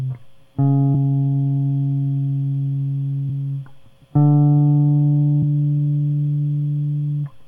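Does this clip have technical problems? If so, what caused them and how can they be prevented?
Yes. Damaged data in a compressed stream causes brief glitches in the music at 0.94, 3.28 and 5.42 s. At each point the decoder misreads corrupted frames and resynchronises. Verified transfers with checksums and error-correcting storage prevent it.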